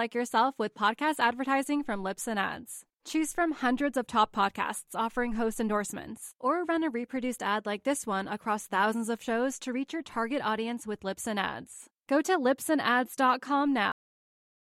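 At 13.92 s the speech has a cut-off end. The sound stops mid-stream and falls straight to digital silence, with no natural decay. The final buffers were never written or played out, so the last 0.73 s is empty.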